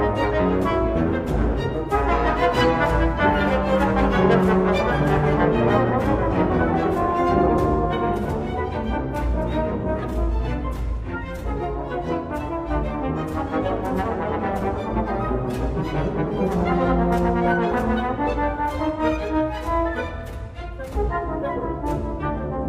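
No technical faults can be heard anywhere in the recording, and the signal holds steady throughout.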